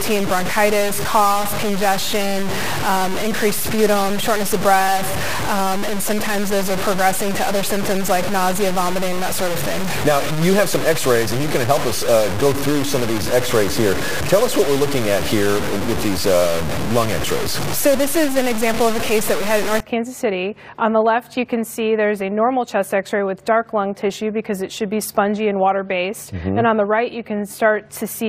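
From the start to 19.8 s the audio is grainy and gritty, with low bit depth without dither. The distortion follows the sound itself, so it rises and falls with it rather than sitting underneath as a steady hiss. The error is roughly as loud as the wanted sound. The likely cause is samples cut to very few levels by truncation with no dither. The coarseness points to about 4 bits.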